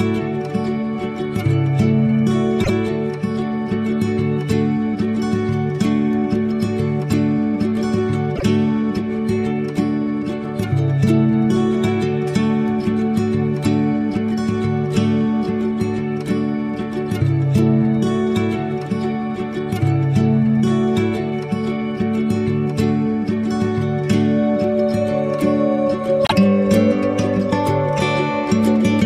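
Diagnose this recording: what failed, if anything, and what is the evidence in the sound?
Repeated frames at 2.63 to 2.71 s, 8.35 to 8.43 s and 26.24 to 26.33 s, a fault in the compressed stream at the codec or storage stage. Each time a short stretch of audio plays twice in a row and is heard as a stutter: 78.4 ms at the first point, which fits three codec frames of about 26 ms, and 26.1 ms, a single frame, at the other two. The duplicated frames are decoded again, so the clip runs longer by those amounts.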